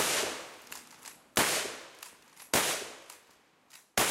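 No technical faults are audible.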